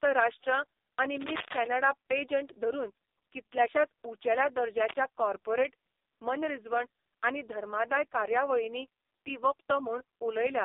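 Throughout, the speech passes through the AMR narrowband mobile codec at its lowest rate, which fits the 4.75 kbps mode. It sits in a 300 Hz to 3.7 kHz band and sounds heavily buzzy and synthetic. From 1.21 to 1.67 s and again from 4.78 to 4.93 s, cable scratch noise, likely from a worn connector whose contact was disturbed, adds ragged scratching bursts only a little quieter than the speech.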